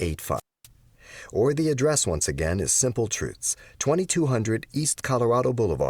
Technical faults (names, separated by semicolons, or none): wireless microphone squelch dropout